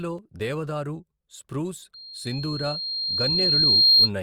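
From 1.94 s, just after "దేవదారు స్ప్రూస్", a loudspeaker feedback squeal begins. The microphone is hearing its own loudspeaker, and the loop gain tops one at 4.2 kHz. That tone swells over about two seconds. It ends near 4.10 s, roughly 15 dB above the speech.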